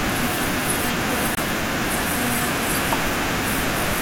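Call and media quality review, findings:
Gap at a join of encoded pieces, 1.35 to 1.37 s: about 22 ms of silence in speech. Separately encoded segments concatenated without trimming encoder delay and padding. Resumes exactly where it stopped, nothing skipped or concealed, unlike packet-loss dropout.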